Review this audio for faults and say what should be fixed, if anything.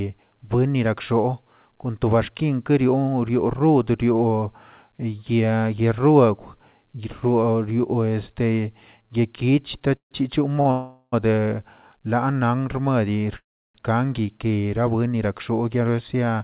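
Call audio freeze at 9.97–10.13 s, 10.71–11.14 s and 13.38–13.76 s: packets were likely delayed in transit, draining the jitter buffer. The receiver extended the last sound as a fading buzz, then silence, and resumed where it stopped. This inserted gaps of 140, 412 and 368 ms, with nothing lost.

Short stall from a late packet at 10.61–10.67 s: one packet missed its playout time, so the buffer ran dry briefly. The receiver stretched the preceding sound by 42 ms with a slight buzz, then carried on from the same point. Nothing is missing.

The G.711 A-law call path, band-limited to 4 kHz, carried the speech through these events. To prevent the faults, reduce network delay variation and congestion on the route, and let the jitter buffer hold enough headroom to ride out delays of a few hundred milliseconds.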